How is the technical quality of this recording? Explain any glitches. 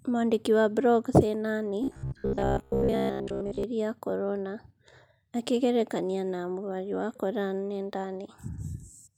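There is one glitch, from 1.84 to 3.64 s, ending just before "ya korona": robotic sound from repeated short buffers. The likely cause is fresh audio arriving too rarely, so playback kept looping the last short chunk, about 15 ms long, while the real signal was skipped for most of that stretch. Those fixed repeats stamp a steady 66.7 Hz buzz onto the speech, leaving a rigid, metallic drone that only loosely tracks the talking.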